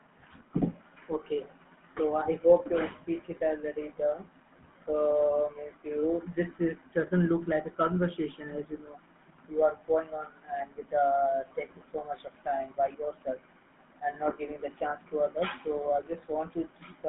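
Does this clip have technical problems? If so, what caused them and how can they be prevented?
Yes. The speech carries GSM full-rate codec damage throughout: a plainly audible buzzy, gravelly roughness, from a vocal-tract model driven by coarse, regularly spaced pulses, which fits a 13 kbps GSM call. A spectrogram shows energy confined to about 150 Hz to 3.5 kHz, nothing above 3.8 kHz, and smeared harmonics. To prevent it, record locally or use a wideband codec rather than sending the audio over a GSM phone link.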